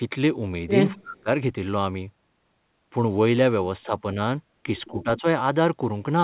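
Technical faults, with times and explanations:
0.94–1.29 s, 3.84–3.92 s and 4.91–5.25 s, speech suppressed in double talk: the talker's level sinks while the far end is talking. The first dip is the deep one, around 30 dB for roughly a third of a second, so the speech almost drops out. The later two are light, only about 5 dB. This is likely an echo canceller that couldn't separate this voice from loudspeaker echo and turned both down. The call runs through G.711, which has nothing above 4 kHz.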